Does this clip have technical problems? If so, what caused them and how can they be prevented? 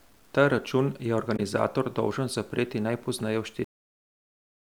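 Yes. The speech carries a grainy distortion throughout that follows the signal, with noise roughly 35 dB below it. This is low bit depth without dither, likely from truncation to about 9 bits. Keep at least 16 bits and apply dither whenever reducing word length.

From 1.36 to 1.40 s, damaged data in a compressed stream produces a brief blip. The decoder misreads the corrupted frames and resynchronises at the next header. Checksummed transport and verified file transfers prevent this.

A cut-off end occurs at 3.64 s, where the sound stops mid-utterance and drops straight to digital silence. The final buffers were never written. Flush and close the output properly before ending the recording or export.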